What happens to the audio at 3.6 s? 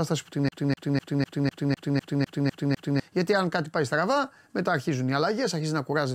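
Nothing goes wrong at 3.6 s: the speech plays through that moment intact, with no dropout, click, distortion or other fault.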